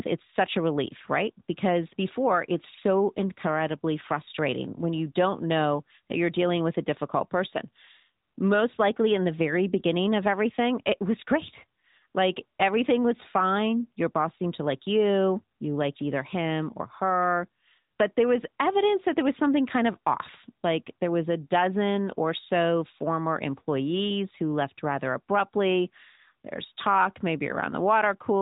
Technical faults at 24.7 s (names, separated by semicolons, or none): AMR narrowband mobile codec